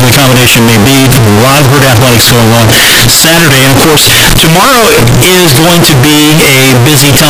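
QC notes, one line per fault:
Throughout: float read as integer. The speech becomes a harsh, near-square wave at an almost fixed, high level. Background noise is as loud as the speech, yet pitch can be followed. This is likely 32-bit float samples decoded as 32-bit integers.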